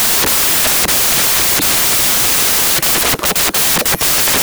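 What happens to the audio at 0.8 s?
At 0.8 s, as everywhere else in this speech clip, the samples are built from the wrong bytes: the reader assembles each sample with its bytes misordered or shifted by one, so the rapidly changing low-order bits end up carrying most of each value. The result at that moment is loud, harsh broadband noise swamping the speech.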